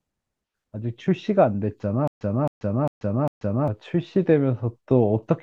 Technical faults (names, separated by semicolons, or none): stutter with silent gaps